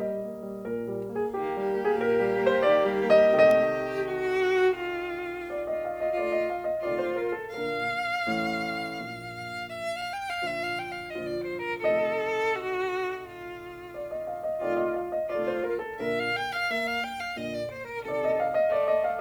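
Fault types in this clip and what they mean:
Loose connector crackle: a worn or dirty contact somewhere in the signal chain briefly loses and regains connection as it shifts, chopping the signal for an instant, and any DC present on the line turns that break into a pop. In this music clip it appears as a single very short event at 3.51 s, a brief click of crackle cutting across the sound rather than an extended scratchy burst.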